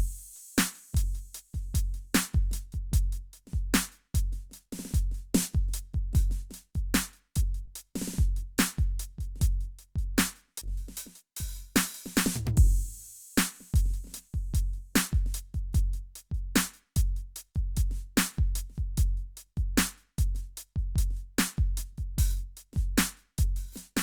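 A music recording with two short concealed packet losses, at 7.65–7.69 s and 10.59–10.63 s, where about 20 ms of audio was lost in transit and synthesized by extending the preceding sound. Each is heard as a brief smear, and spectrograms show momentarily frozen, blurred harmonics.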